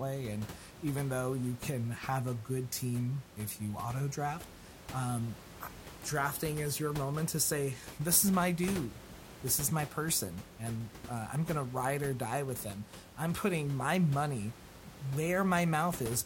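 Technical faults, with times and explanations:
No technical faults heard.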